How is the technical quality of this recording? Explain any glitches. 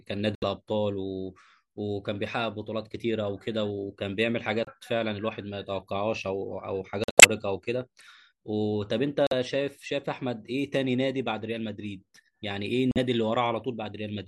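The recording has five abrupt dropouts from corrupt frame muting at 0.35–0.44 s, 4.65–4.68 s, 7.04–7.25 s, 9.27–9.33 s and 12.91–12.98 s. Damaged compressed frames were rejected and replaced with silence, which cuts the speech instantly without shifting its timing. The gaps last about 36 to 210 ms, which points to whole frames of roughly 26–36 ms each. On a waveform they appear as flat silent stretches with sharp edges, and on a spectrogram as clean vertical blank bands across all frequencies.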